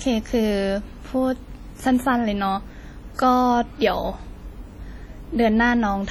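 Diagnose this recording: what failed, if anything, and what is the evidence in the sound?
Heavy WMA compression damage at the codec stage runs through the whole speech recording, most likely from a low-bitrate encode around 32 kbps. Quantisation noise smears across long transform blocks, leaving a ringing, washy halo around syllables and a hiss that swells and fades with the speech. Content still reaches about 20.1 kHz, so this is zeroed and coarsely quantised spectral lines, not a band-limiting filter or the steady noise floor of an analogue fault.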